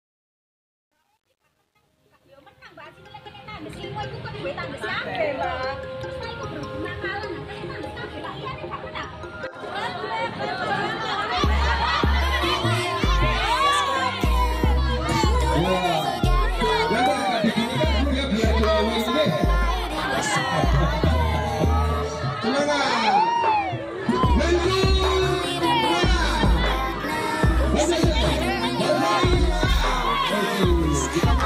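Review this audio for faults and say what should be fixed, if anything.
The fade-in from 0 to 3.93 s carries truncation distortion. The level rises smoothly, but the quietest stretch from the start to about 2.41 s sounds gritty, which points to a fade computed at roughly 10 bits with no dither, so the low-level waveform collapses into coarse square steps. Unlike a noise gate chattering, the grit tracks the fade curve and eases as the level climbs. Prevent it by fading at high resolution and dithering when reducing bit depth.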